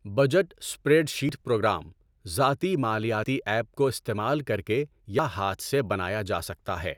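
At 1.29 s, 3.24 s and 5.19 s the speech jumps forward abruptly, each time dropping roughly 50 ms and butting the surrounding audio together with no gap. The skips recur at a steady interval of close to 2 s, the signature of audio missing between chunks. The likely cause is a recorder or processor handling the stream in 2-second blocks and losing a short slice at each handover.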